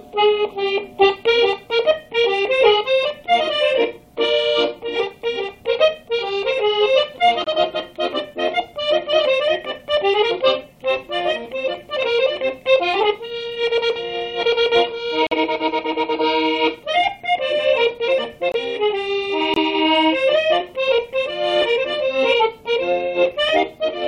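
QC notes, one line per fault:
7.44–7.48 s, 15.27–15.33 s, 18.52–18.56 s and 19.54–19.58 s, corrupt frame muted: flipped bits made the decoder reject compressed frames, so abrupt silent holes of 40 to 60 ms appear, about one or two frame lengths, without shifting the timing.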